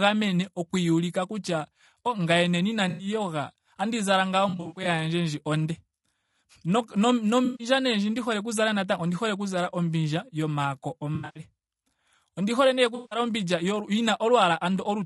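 Throughout, the speech has passed through what is likely a low-delay AAC (AAC-ELD) encoder running at a low rate, consistent with about 32 kbps. Its short frames resolve the voice's harmonics poorly, so the sound is plainly rough and grainy, with noise filling between harmonics.

AAC frame loss with concealment strikes five times. Each time, audio went missing and the decoder filled the gap from the last good spectrum, leaving a smeared, noisy, phasey patch:

At 2.89 to 3.07 s, about 100 ms is lost.

At 4.49 to 4.87 s, 200 ms is lost in short scattered runs.

At 7.45 to 7.67 s, just before "nee ndji ndi hole", 140 ms is lost.

At 11.15 to 11.42 s, after "oku zala ombindja yomaako", the loss includes a run of roughly a tenth of a second.

At 12.95 to 13.19 s, after "hole nee", 160 ms is lost.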